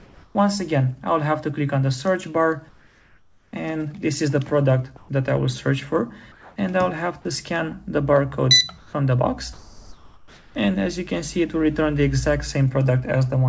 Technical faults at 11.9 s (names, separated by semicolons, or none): none